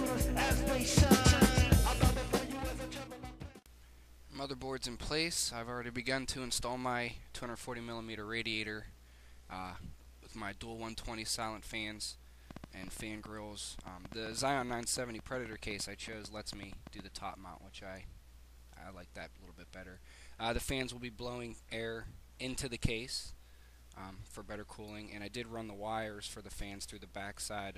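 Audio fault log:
12.51 to 17.00 s, train of clicks: a run of about thirty similar-shaped pops at roughly 6.9 per second, unevenly spaced and poking out around 5 dB above the sound itself. That ticking is likely interference from nearby gear or a faulty connection or power supply.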